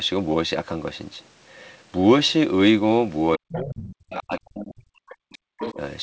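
At 2.28 to 2.32 s a brief, very faint second voice, roughly 40 dB under the speech, flickers in. This is other side's voice leaking through, likely because the echo canceller left some loudspeaker playback in the microphone signal.

From 3.36 to 3.79 s the speech sinks sharply, by as much as about 40 dB. This is speech suppressed in double talk, likely because the canceller turned everything down while both sides spoke at once.

Inside that dip, at 3.49 to 3.59 s, the leaking far-end voice surfaces again, now only about 15 dB below the speech. It returns at 3.77 to 4.18 s at a similar level.

From 4.17 to 5.19 s the talker is held down again for about a second, with drops that reach about 40 dB.

The leak comes back faintly at 5.30 to 5.38 s, about 30 dB down. At 5.59 to 5.74 s it is much more prominent, only about 10 dB below the speech.

Right after, at 5.74 s, there is a brief and shallower duck of about 10 dB.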